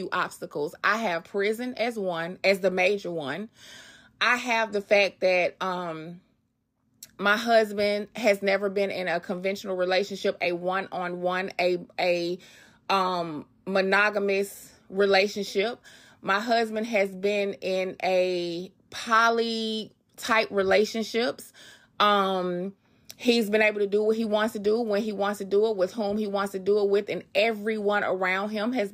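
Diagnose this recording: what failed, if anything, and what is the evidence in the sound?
Nothing failed; no faults heard.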